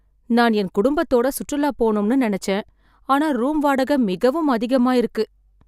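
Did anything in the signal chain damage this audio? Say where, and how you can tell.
No, nothing in the signal chain damaged this audio.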